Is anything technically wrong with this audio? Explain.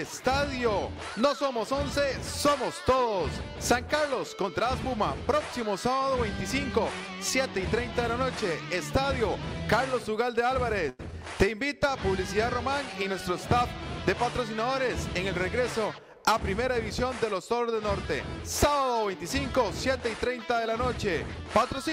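Yes. From 10.89 to 11.13 s the sound stalls into a held sound that fades and then jumps ahead, with about 100 ms missing. This is a burst of packet loss: the receiver stretched the last received audio for roughly 94 ms, decaying it, before playback resumed.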